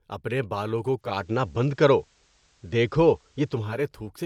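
At 0.95 s the receiver loses the digital signal and blends to FM over 384 ms, returning at 3.84 s: digital radio blending to analogue. The speech level shifts by about 4 dB, and faint hiss appears around 40 dB down.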